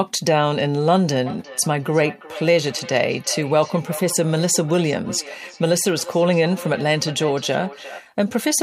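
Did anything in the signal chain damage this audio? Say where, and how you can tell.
Yes. From 1.26 s to 8.07 s there is feedback echo between two devices, a call-processing fault: another device's playback re-enters the microphone, outside its echo canceller's reach. Each word returns roughly every 0.4 s, peaking about 16 dB below the speech. A spectrogram shows evenly spaced, fainter copies of each word.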